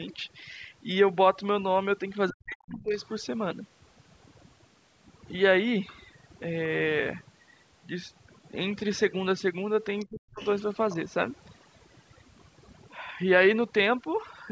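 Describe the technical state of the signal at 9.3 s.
At 9.3 s the background drops and breaks up into twinkling specks. This is overdone noise removal, present throughout the clip: an over-strong noise reducer is cutting individual frequency bands near its noise estimate, taking quieter parts of the voice with them.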